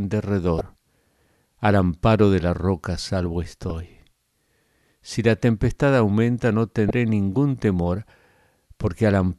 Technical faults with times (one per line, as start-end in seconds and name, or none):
0.58-0.61 damaged data in a compressed stream
3.70 damaged data in a compressed stream
6.87-6.91 damaged data in a compressed stream